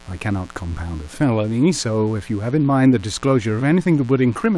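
From start to finish, switching spikes from a dimmer, rectifier or unshielded line leak into the signal path twice per 60 Hz mains cycle, producing mains buzz: a steady, raspy drone of 60 Hz harmonics reaching into the kilohertz range, sitting roughly 30 dB beneath the speech.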